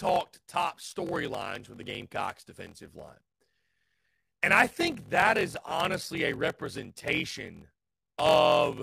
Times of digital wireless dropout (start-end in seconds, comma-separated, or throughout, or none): none